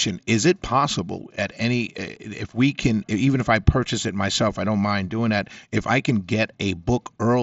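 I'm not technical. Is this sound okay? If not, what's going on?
No. At 2.16 s, between "possible at any eh" and "if we can even", there's unconcealed Bluetooth headset packet loss: a gap of about 7.5 ms, consistent with one lost packet between headset and phone, left as a hard-edged hole in the speech over the mSBC headset link.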